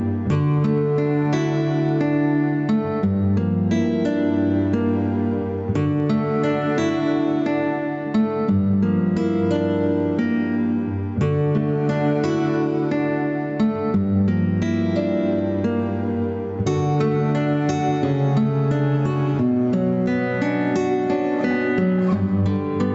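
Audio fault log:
throughout: gain pumping. The gain swings by about 10 dB. Loud and soft parts end up squashed together. The likely cause is gain set far too high, with a fast limiter clamping peaks.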